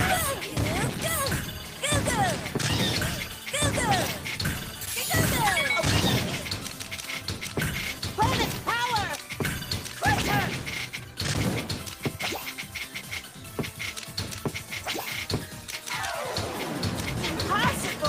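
Nothing in the signal points to a technical fault at any point in the recording.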